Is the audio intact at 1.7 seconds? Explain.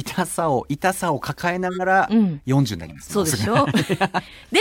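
No, 1.7 seconds sits inside a corrupt frame decoded, running from about 1.66 to 1.81 s. A few consecutive compressed frames, around three judging by the span, had flipped bits, and the decoder played them anyway. Misread gains and codes scatter energy to the wrong frequencies, so for that stretch you get a short, harsh burst of chirpy noise, peaking fairly loud, around -10 dBFS, before the sound snaps back.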